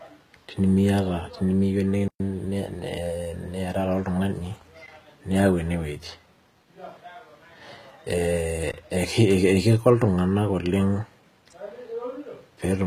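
Throughout the clip, the speech was likely coded with HE-AAC compression at a very low bitrate, one that fits roughly 20 kbps. The treble is rebuilt from lower bands rather than kept, so s sounds come out gritty and metallic, and nothing is present above 14.9 kHz.

At 2.08 s a block of digital silence replaced the audio until 2.20 s. The sound drops to a 120 ms hole, cutting out and back with no fade. At 4.86 s a second block of digital silence, lasting only about 17 ms, comes across as a brief hole.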